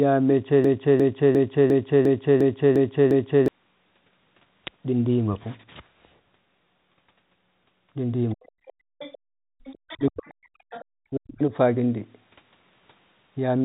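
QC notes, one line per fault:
0.64–3.48 s, broken-record loop: the stream likely stalled and resent its last held fragment, so a 352 ms piece repeats exactly eight times back to back, replacing the audio that belonged there.
8.30–9.18 s, other side's voice leaking through: loudspeaker playback was likely not fully cancelled from the microphone, so a second voice sits about 20 dB below the main speech.
8.33–8.57 s, speech suppressed in double talk: with both sides active, the canceller likely turned the talker down too, so the speech dips by up to about 40 dB for around 150 ms.
9.20–9.64 s, background gated by the echo canceller: the canceller clamped the microphone hard while the loudspeaker played, so the room sound drops by as much as 40 dB for about 400 ms.
9.64–10.29 s, other side's voice leaking through: residual loudspeaker echo likely escaped cancellation again, so the far voice returns faintly, about 20 dB under the speech.
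9.96–10.66 s, speech suppressed in double talk: overlapping talk likely confused the canceller into attenuating the near talker, who dips by up to about 40 dB across roughly 700 ms.
10.70–10.85 s, other side's voice leaking through: a brief scrap of uncancelled far-end echo, likely from the loudspeaker, surfaces about 20 dB below the speech.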